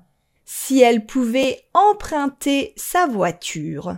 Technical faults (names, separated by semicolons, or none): repeated buffer